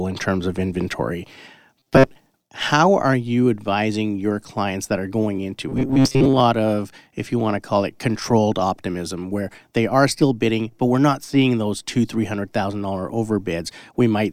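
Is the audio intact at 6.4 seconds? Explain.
No, 6.4 s is the tail of robotic sound from repeated short buffers (5.69–6.40 s, after "that are going into"): a rigid 133 Hz buzz, likely from looping a roughly 7.5 ms buffer.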